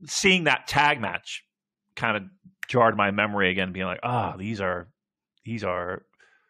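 No technical faults are audible anywhere in the speech recording.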